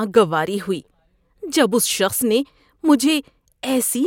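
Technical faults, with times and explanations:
No technical faults can be heard anywhere in this speech recording. There is nothing to mark at any point in the clip.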